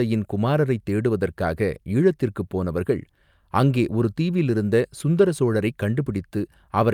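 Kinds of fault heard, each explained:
No audible technical faults are present in this speech recording.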